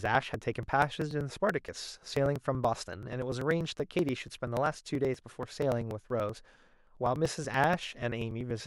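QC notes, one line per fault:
0.06–8.60 s, periodic USB or driver dropouts: a steady ticking runs through the speech, one tick every 0.096 s, heard only where there is signal. Something stalls the USB bus or driver at that interval, skipping about 4 ms of audio each time, around a hundred gaps.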